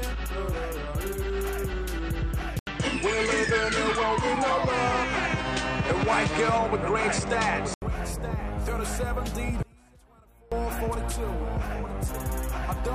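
The audio has two faults. From 2.59 to 7.82 s, after a silence of about 80 ms, the sound turns duller, with nothing above 9.2 kHz, a level shift of a few decibels and a new noise floor. That is likely an input switched to a poorer device, not an EQ change, because tone, level and noise all change together. From 9.63 to 10.52 s, the signal cuts abruptly for 0.89 s, leaving only a faint trace well below normal level. This is likely an audio dropout to a faint residue, not a pause or fade, because the cut is instant and the path stays live.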